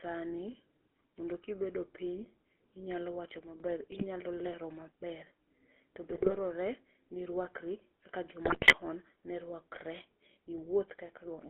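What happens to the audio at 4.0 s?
GSM bit errors strike from 3.92 to 4.04 s, just before "lero maber". Corrupted bits in a few consecutive codec frames reach the speech decoder, so the filter, pitch and gain values it rebuilds from are wrong. For about an eighth of a second the spectrum bends out of shape and the level jumps, and the speech breaks into a brief squawking, gargling burst with pops.

Underneath this, the whole clip carries the GSM full-rate codec, which fits the 13 kbps full-rate scheme. It models the vocal tract and drives it with a sparse, regularly spaced pulse excitation, giving the speech a plainly audible buzzy, gravelly roughness. The band is confined to roughly 300 Hz to 3.5 kHz, so the corrupted burst sits within that same narrow telephone band.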